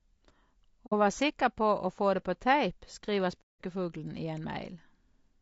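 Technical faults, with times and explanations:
Throughout: low-delay AAC compression. The speech has a rough, grainy texture, with noise filling the gaps between pitch harmonics and a top band that sounds thinned and somewhat synthetic. The likely cause is a low-delay AAC coder such as AAC-ELD at a modest bitrate. Its very short frames give poor frequency resolution, so the harmonics of the voice are smeared and the bit budget runs out before the spectrum is described cleanly, which leaves this plainly audible damage.
0.86 to 0.93 s, and 3.41 to 3.62 s: AAC frame loss with muting. Two dropouts cut the speech, the first just before "vær sikker på å" and lasting about 70 ms, the second right after "det på tape skriver" and lasting about 210 ms. The decoder received nothing for those frames and output silence in their place, with about 60 ms and 180 ms of coded audio lost, which fits two and six frames. 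Because the overlapping transform windows taper into and out of the missing frames, each gap fades down and back up instead of cutting abruptly. The holes sound soft-edged.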